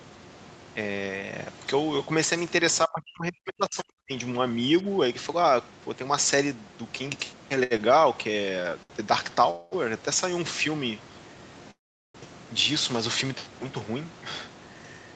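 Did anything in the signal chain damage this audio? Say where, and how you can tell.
Yes. The first damage is in the call processing, from 2.86 to 4.11 s. For about a second the speech drops by about 40 dB. This is likely speech suppressed in double talk: the echo canceller mistook the talker for loudspeaker echo and attenuated both.

The next stage is the network and jitter buffer. Short stalls from late packets occur at 7.63 s (71 ms), 7.77 s (19 ms), 8.62 s (22 ms) and 8.83 s (71 ms). Each time a sound is held slightly too long. The buffer ran dry and stretched the last audio until the packet arrived.

Two longer call audio freezes follow, at 9.51 to 9.75 s and at 11.71 to 12.17 s. The first fills 210 ms with no silence. The second fills 437 ms, 400 ms of it silent. Delayed packets likely emptied the jitter buffer, and playback then resumed where it stopped.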